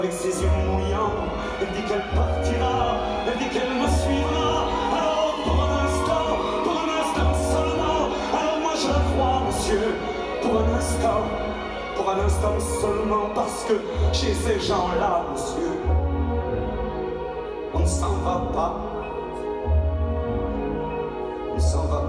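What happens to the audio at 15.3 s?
Nothing goes wrong at 15.3 s; the audio carries on intact through that moment with no dropout, glitch or distortion.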